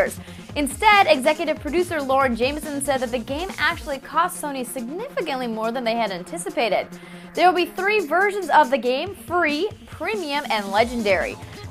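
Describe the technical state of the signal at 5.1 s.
At 5.1 s the signal is intact, with no dropout, distortion, glitch or other technical fault at that moment.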